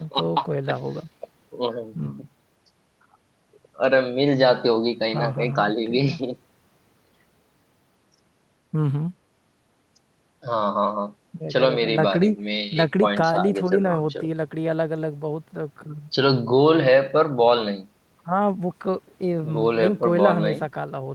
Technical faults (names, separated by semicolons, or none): none